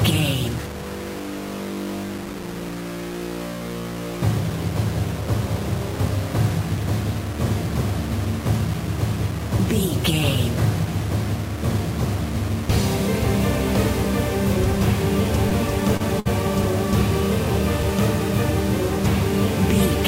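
Throughout, a grainy distortion that follows the sound points to low bit depth without dither, likely about 5 bits rounded plainly, leaving error only about 15 dB below the signal. At 15.49 to 15.53 s and 15.97 to 16.02 s, short concealed packet loss appears as brief smears: the decoder extended the preceding sound to cover 15 and 27 ms gaps, with roughly 20 ms of audio missing each time. A burst of packet loss follows at 16.20 to 16.27 s. About 60 ms never arrived, so the last sound is held and fades before the audio resumes further along.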